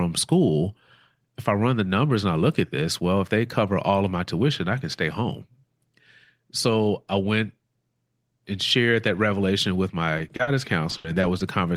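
Speech that turns choppy and robotic from 10.18 to 10.48 s, right after "shared that revelation with", and again from 10.90 to 11.41 s: repeated packet loss, with four short gaps in each stretch patched by extending the preceding sound.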